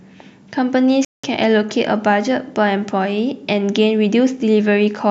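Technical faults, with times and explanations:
1.05–1.24 s, Bluetooth stall: the speech drops abruptly into 0.19 s of complete silence and then resumes, with no fade either side of the gap. The likely cause is radio interference delaying packets on the wireless link, so the headphones' small playback buffer emptied and output simply stopped until retransmitted packets arrived, leaving a hard-edged hole rather than a gradual dropout.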